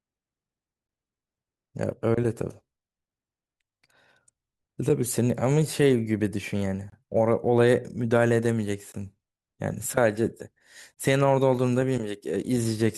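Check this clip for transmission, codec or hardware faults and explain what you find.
The clip has one transmission fault, a gap between stream segments, occurring three times at two-second intervals. The timestamps of consecutive segments fail to meet, which fits 2-second segments, and the player fills each hole with silence instead of audio. The speech drops out abruptly at 6.90 to 6.92 s (about 24 ms), 8.92 to 8.94 s (about 19 ms) and 10.94 to 10.97 s (about 27 ms). Each gap is a brief, hard-edged hole. Nothing is lost, but each gap pushes the audio later in time.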